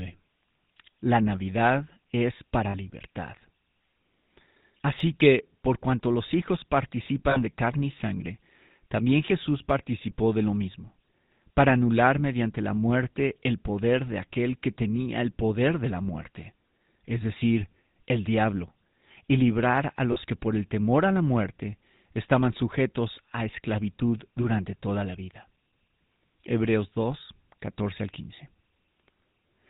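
GSM full-rate codec damage runs throughout: vocal-tract modelling with sparse pulse excitation gives the speech a plainly audible buzzy, gravelly roughness, consistent with 13 kbps full-rate GSM.

Lost GSM frames occur at 2.70 to 2.75 s, 7.30 to 7.50 s and 20.12 to 20.18 s. Each gap is filled by repeating the last good frame, leaving a brief rough, metallic ring.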